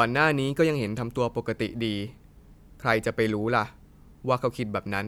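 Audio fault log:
No faults heard.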